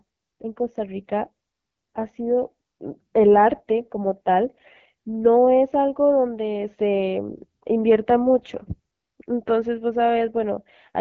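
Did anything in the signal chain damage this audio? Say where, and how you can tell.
Yes. Throughout, the speech sounds rough and raspy, and nothing reaches above about 6.9 kHz. This points to the AMR wideband (HD Voice) codec at one of its two lowest modes, which fits 8.85 kbit/s. Its pulse-driven vocal tract model has too few bits, and the 6.4 to 7 kHz band is only shaped noise.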